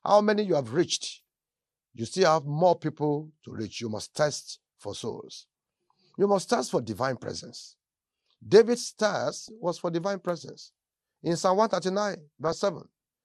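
Across the whole recording the speech sounds dull and plainly gurgling, with a granular edge and upper frequencies that seem to switch in and out. This is MP2 compression, likely from too few bits for MPEG Layer II's 32 sub-bands, which fits a stream of about 80 kbps. Starved upper bands drop out and the remaining bands are coarsely quantised.

Four bursts of DAB burbling break into the speech. The first runs from 1.07 to 1.20 s, just after "how many you have". The second runs from 7.36 to 7.73 s, after "must test for divine". The third runs from 9.31 to 9.49 s, just before "was for divine presence". The last runs from 12.45 to 12.59 s. In each burst, bit errors at a rate of roughly 0.4 to 0.7 percent have slipped past error correction. Corrupted samples then put short blips of noise into single sub-bands, and corrupted scale factors, where they get through, make sub-bands jump in level for up to a frame.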